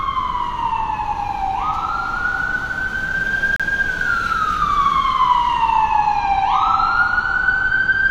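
The clip is a recording of sounds, interrupted once by a gap between stream segments from 3.56 to 3.60 s. For about 34 ms the audio drops to hard-edged digital silence and then resumes abruptly. The timestamps of two consecutive segments do not quite meet, and the player fills the missing interval with silence. Nothing is cut from the recording. The silence is inserted, so everything after it plays about 34 ms later.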